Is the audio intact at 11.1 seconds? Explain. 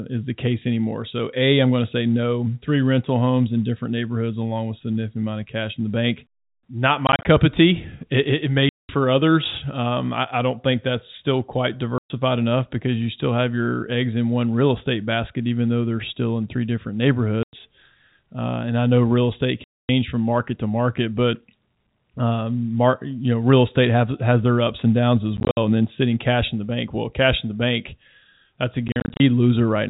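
Yes, at 11.1 seconds the speech is intact, with no dropout, click or distortion, only the narrow telephone band of the G.711 coding path.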